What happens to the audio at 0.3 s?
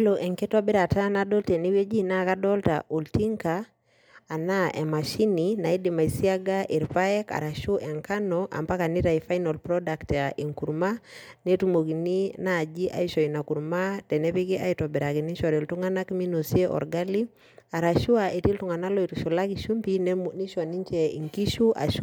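Nothing goes wrong at 0.3 s; the speech plays through that moment intact, with no dropout, click or distortion.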